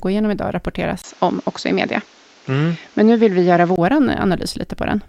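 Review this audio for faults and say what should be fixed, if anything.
After "igenom idag", from 1.02 s to 3.78 s, the speech turns dull. Nothing above 7.6 kHz remains. A 20 ms gap and faint new hiss appear. Likely an input switched to a poorer device. Lock the recording input so it cannot change mid-session.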